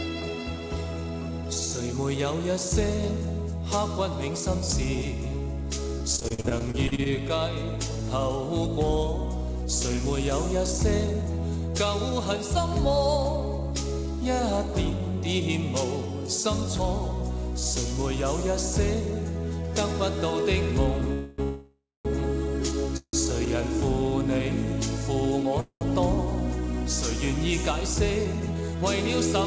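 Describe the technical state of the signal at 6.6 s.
At 6.6 s the signal is inside a burst of repeated packet loss, 5.98 to 7.07 s. Holes of up to 44 ms are patched by extending the previous sound, making it choppy and robotic. Waveform and spectrogram show repeated, smeared frames with abrupt seams.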